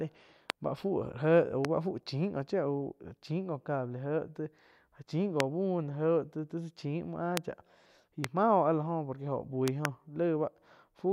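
Loud pops land at 0.5, 1.65, 5.4, 7.37 and 8.24 s (just before "mah oh áh la"), then a double pop from 9.68 to 9.87 s. Each is a sharp thump about 20 to 25 dB above the speech, likely a voltage spike, while the speech carries on intact beneath it, unlike a dropout click.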